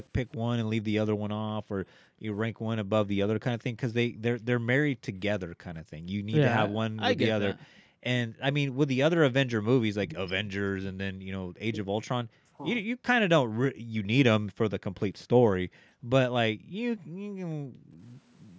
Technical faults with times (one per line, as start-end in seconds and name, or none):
0.31-0.37 echo leak
1.66-6.29 background gated by the echo canceller
3.59-3.64 echo leak
7.67-13.03 speech suppressed in double talk
8.28-8.40 background gated by the echo canceller
13.46-13.94 background gated by the echo canceller
15.65-18.00 background gated by the echo canceller